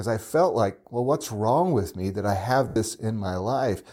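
Speech with lost LE Audio frames at 2.68 to 2.76 s, right after "with me that I": for 80 ms, roughly eight 10 ms LC3 frames, the decoder repeats the last spectrum with scrambled phase and fades it, so a spectrogram shows harmonics dissolving into a decaying noisy smear.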